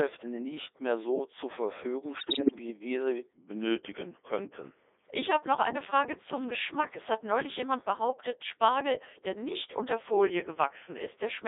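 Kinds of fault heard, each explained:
Codec 2 vocoder: The whole speech clip has the buzzy, robotic quality of a very low-rate vocoder that sends only pitch, voicing, energy and a spectral envelope, then rebuilds the voice from sine waves. The sound fits the 3.2 kbit/s mode and is heavily damaged. A spectrogram shows energy confined to roughly 300 Hz to 3.7 kHz, with unnaturally regular harmonic combs and smeared transients. The waveform looks synthetic rather than like the original.
bit errors on digital voice radio: From 2.16 to 2.56 s, just before "wie wir sie", corrupted bits reach the vocoder. Each bit steers a whole frame's pitch, level, voicing or spectrum, so the voice lurches into warbles, bleeps and garbled tones. The damage spans about 19 frames and fits an error rate of several percent. A spectrogram shows abrupt frame-to-frame jumps in harmonic spacing and energy, and the waveform shows jagged level steps.
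drift correction step: From 3.33 to 5.05 s, right after "wie wir sie", and from 10.16 to 11.01 s, after "der nicht unter", playback slows by about 5.8 percent and drops about 104 cents, roughly a semitone, then snaps back. The likely cause is clock-matching software changing the playback rate in one step to manage its buffer. On a spectrogram the harmonics shift downward as a block, and the waveform stretches slightly in time.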